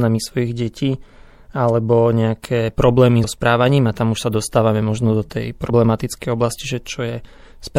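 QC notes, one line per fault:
throughout: MP3 compression. Plainly audible watery, swirling texture with smeared attacks and metallic chirps on s sounds. This is likely lossy coding at a low bitrate, consistent with about 64 kbps, where weak frequency lines are zeroed and flicker between frames and the treble is cut.
3.23 s and 5.69 s: compressed frames skipped. At each point the audio jumps ahead with a brief smeared blip, dropping roughly 70 ms and then about 50 ms. That fits losing about three and two frames of roughly 26 ms each, either missing or rejected as damaged.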